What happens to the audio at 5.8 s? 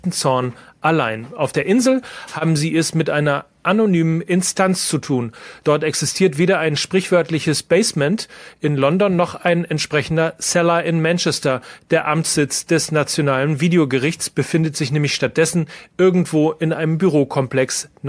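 Nothing goes wrong at 5.8 s; the speech passes through that moment intact, with no dropout, click or distortion.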